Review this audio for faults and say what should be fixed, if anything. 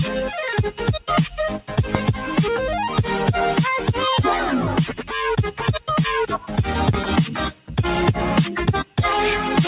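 A noise suppressor applied to music or sounds stays active for the whole clip. It treats sustained tones, ambience and decays as noise, so the level swings by around 5 dB as it clamps and releases. Attacks pass while held portions sag, which gives a pumping, thinned character. On a waveform the envelope breathes between transients. On a spectrogram, sustained partials fade in and out instead of running as steady horizontal lines. Bypass speech-oriented suppression whenever the source is not speech.

Two loud pops sit on top of the sound, which continues underneath. The first runs from 1.95 to 1.98 s and peaks about 20 dB above the surrounding signal. The second runs from 6.93 to 6.96 s and peaks about 15 dB above it. Each is a single sharp pulse, likely from a connector, switch, static discharge or driver glitch injecting a voltage step. A waveform shows a narrow spike towards full scale. 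A spectrogram shows a thin vertical stripe spanning the whole band, up to the 4 kHz ceiling that the G.711 call codec imposes. Secure cables, ground equipment and avoid switching hardware during capture.

There are three places where the sound is cut by the noise suppressor. These run from 4.89 to 5.12 s with a drop of about 9 dB, from 6.34 to 6.52 s at about 9 dB, and from 7.50 to 7.73 s at about 10 dB, each lasting roughly a fifth of a second. Here the suppressor judged steady or decaying material to be noise and pulled it down harder than elsewhere. The waveform shows brief notches in the envelope. The spectrogram shows short darker gaps across the band while onsets remain bright. Disabling the suppressor for non-speech content prevents these dips.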